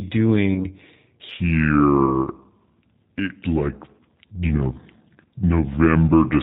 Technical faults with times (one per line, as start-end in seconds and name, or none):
0.00-6.42 G.729 codec
0.54-0.68 VoIP packet loss concealed by the speech codec
1.29-6.42 section at the wrong speed
2.06-2.27 VoIP packet loss concealed by the speech codec
4.47-4.53 VoIP packet loss concealed by the speech codec